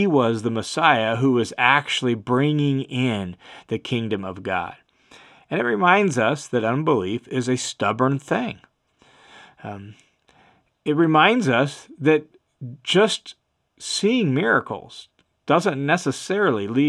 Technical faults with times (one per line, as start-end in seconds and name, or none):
none